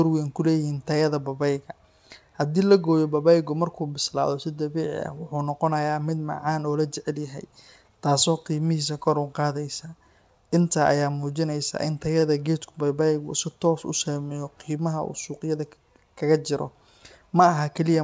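At 12.20 to 12.24 s, right after "ayaa muujinaysa in", one sound hangs on a beat too long with a faint buzzy flatness before the speech carries on. This is a short stall from a late packet: the jitter buffer ran dry, so the receiver stretched the last sound for 25 ms until the data turned up, then resumed at the same point. Nothing is lost, but playback now sits 25 ms later.

From 14.70 to 15.41 s, just after "u saameyso", the speech sounds slightly hurried, about 6% faster, yet the pitch stays put. That is a jitter buffer speed-up: with more audio queued than the target, the receiver trimmed small pitch-period slices repeatedly, removing roughly 50 ms in total to pull the delay back down. Across both events the G.722 call path keeps its band limit, with nothing above 8 kHz.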